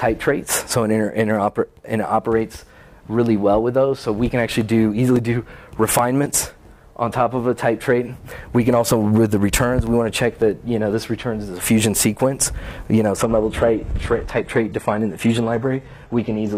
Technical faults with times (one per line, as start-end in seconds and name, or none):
4.61-7.08 CD scratch ticks
9.04-10.96 CD scratch ticks
13.16-16.57 adaptive stream at a lower bitrate